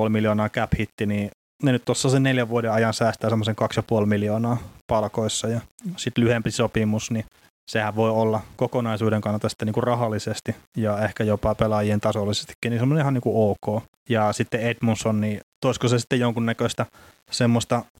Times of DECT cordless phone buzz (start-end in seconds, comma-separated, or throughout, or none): none